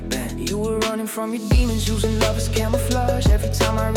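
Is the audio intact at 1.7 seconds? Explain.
Yes, the audio at 1.7 seconds is intact, with no dropout, click, distortion or other fault at that point.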